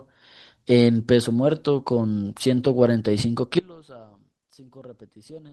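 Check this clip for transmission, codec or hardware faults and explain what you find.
One fault: an audio dropout to a faint residue from 3.59 s to the end. The speech cuts abruptly to a faint leak roughly 25 dB down, likely a lost connection with the path still live. The waveform collapses suddenly, and the spectrogram thins to a weak trace.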